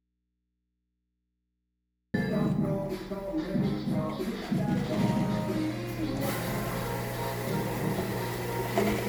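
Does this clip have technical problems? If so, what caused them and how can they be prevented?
Yes. Audio dropout to a faint residue, from the start to 2.14 s: the wanted sound is absent, leaving only mains hum far below normal level, likely a lost input while the chain stayed live. Secure connections and monitor the input before recording.

Generation loss, throughout: the sound is swirly, smeared and hollow with blurred attacks, likely from about four successive lossy passes at roughly 95 kbit/s MP3. Keep a lossless master and encode only once, at the end.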